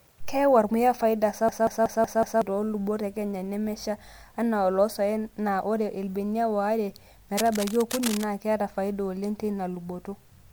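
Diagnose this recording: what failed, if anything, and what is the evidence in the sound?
At the driver or buffer stage, the system hung while the audio hardware kept replaying its ring buffer. Just after "ormuya faida", from 1.49 to 2.42 s, one 186 ms slice of speech repeats exactly five times at about 5.4 Hz, which fits an 8192-sample buffer. Because the loop is that long, it comes across as a machine-gun stutter rather than a buzz, and about a second of real audio never reached the recording.

In the analogue wiring, there is cable scratch noise from 7.36 to 8.24 s, ending just before "naa keeta faida oleng". Dense, irregular bursts of scratchy rustle sit over the speech, roughly 10 dB below it. This is likely a worn cable, connector or control being moved, so that its contact resistance jumps around rapidly and modulates the signal with erratic noise for that stretch.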